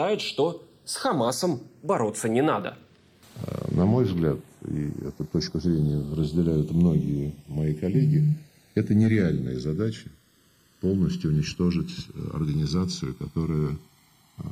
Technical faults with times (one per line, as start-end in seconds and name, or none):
0.00-14.52 channels drifting apart